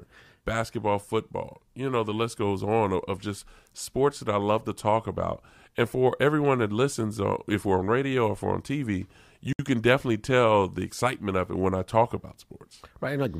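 A speech recording with a gap at a join of encoded pieces: a silence of about 64 ms from 9.53 to 9.59 s, smeared at its edges. Two separately encoded segments were joined untrimmed, leaving encoder start delay and final-frame padding in place before the speech resumes.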